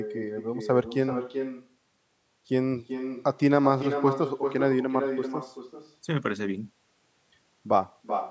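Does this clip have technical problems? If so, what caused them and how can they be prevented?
Yes. Echo with no canceller: the far end's loudspeaker output leaks into its microphone, returning the sound about 7 dB quieter roughly 0.4 s later throughout. Waveform and spectrogram show quieter, delayed duplicates of the talker's speech bursts. Enable acoustic echo cancellation at the far end, or have that listener wear headphones.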